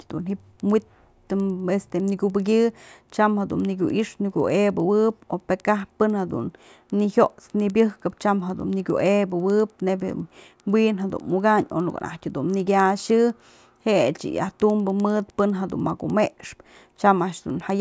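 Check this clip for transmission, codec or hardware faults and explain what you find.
There is one fault, and it runs through the whole speech clip: the resampler restarted on every block. The conversion from 48 kHz to 16 kHz was done in separate 100 ms chunks, with no history carried across each boundary, so each chunk edge carries a small error. That comes through as a faint tick ten times a second that appears only while sound is present. On a spectrogram it shows as thin vertical lines every 0.1 s, and the waveform has small discontinuities at those points.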